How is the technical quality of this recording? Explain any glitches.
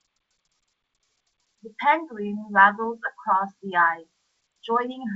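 No glitches or faults are audible; the speech comes through G.722 wideband telephone coding at 64 kbit/s, with its upper-band hiss faint at most.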